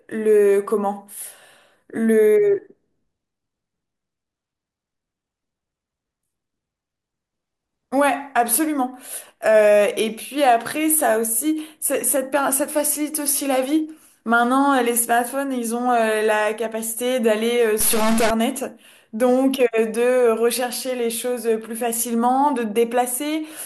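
A stuck bit, likely a broken converter line, throws roughly half the samples off by a large step from 17.80 to 18.30 s, causing harsh, buzzy distortion.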